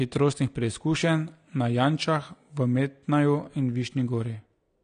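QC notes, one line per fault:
Throughout: AAC compression, likely at a low bitrate around 32 kbps. The speech sounds dull, with a plainly audible smeared, warbling texture on sustained sounds. On a spectrogram, nothing appears above 9.9 kHz.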